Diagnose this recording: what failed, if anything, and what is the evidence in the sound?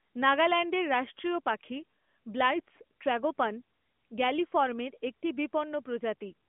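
Nothing has failed: the speech sits in a narrowband telephone channel, roughly 200 Hz to 3.5 kHz with nothing above about 3.6 kHz, and carries the light coding texture of an AMR narrowband mobile codec path, which fits its highest 12.2 kbps mode.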